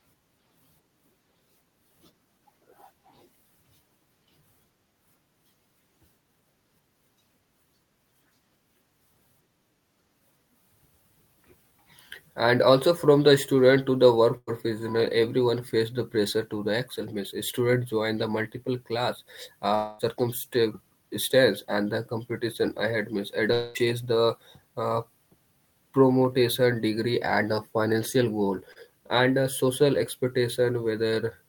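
At 14.37 to 14.49 s there is a burst of packet loss. About 100 ms of speech never arrived. The receiver stretched the last sound for about 98 ms and faded it down. The speech then resumes later, with that stretch gone.

At 19.75 to 20.01 s and 23.53 to 23.77 s, the sound is replaced by a fading continuation of what came before, with no true silence. About 240 ms and 220 ms go missing. A long network dropout is the likely cause.

At 28.73 to 28.78 s comes a short concealed packet loss. About 40 ms failed to reach the decoder in time. About 30 ms of it was filled by extending the preceding sound and blending back. It passes as a brief smear.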